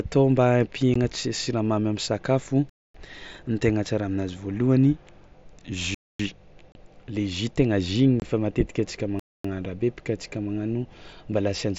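A speech recording with two kinds of dropout. Brief, hard-edged holes at 0.94 s, 6.72 to 6.75 s and 8.20 to 8.22 s, lasting roughly 15, 30 and 22 ms, are unconcealed Bluetooth headset packet loss: voice packets between headset and phone went missing and silence replaced them, with lengths that fit lost 7.5 ms mSBC frames carried over the wideband headset link. Longer silences of 250 ms at 2.70 to 2.95 s, 5.94 to 6.19 s and 9.19 to 9.44 s, recurring about every 3 s, are a gap between chunks: the audio was delivered in 3-second blocks and a pause was left at each join, so nothing is lost but the flow breaks abruptly.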